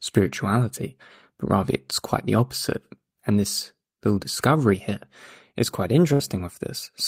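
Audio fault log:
6.13 to 6.22 s, burst of packet loss: right after "discovery here is quite", a short run of packets goes missing. The receiver papers over it by carrying the last bit of sound forward for about 60 ms and letting it fade, so you get a brief held, dying smear instead of silence. When audio picks up again, roughly 60 ms of speech has simply been skipped, so the phrase lurches forward with a tiny chunk gone.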